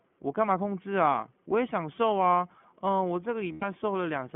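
Speech is carried through the iLBC codec for its whole length. The band is cut to roughly 150 Hz to 3.4 kHz. The coding damage is plainly audible, giving the voice a rough, synthetic edge. This fits 20 ms frames at 15.2 kbps. At 3.52 s there is a 100 ms gap from lost iLBC frames, ending at 3.64 s. The decoder fills it by repeating the last pitch cycle mixed with noise. It sounds like a held, buzzy or breathy vowel. Each iLBC frame decodes on its own, so the voice recovers almost at once after the gap.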